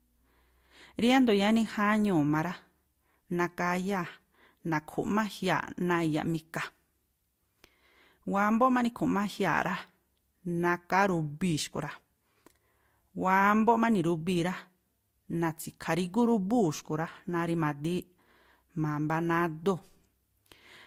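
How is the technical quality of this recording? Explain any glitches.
The recording has a lossy-coding fault that runs the whole way through.

Transcoding between lossy codecs affects the speech from start to finish. The sound most likely passed through one lossy encoder and then a second. The texture fits a Vorbis stage near 47 kbit/s followed by Opus near 48 kbit/s. The second encoder spends its bits reproducing the first one's artefacts, then adds its own, so both sets of artefacts sit together in the speech. The band stops at 20.1 kHz, the lowest cut-off in the chain.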